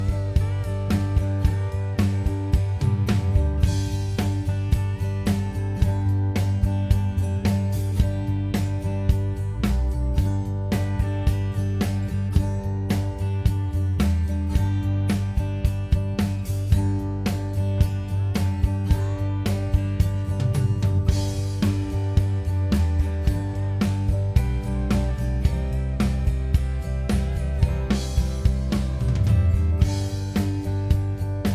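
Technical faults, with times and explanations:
Nothing stood out on listening to this recording.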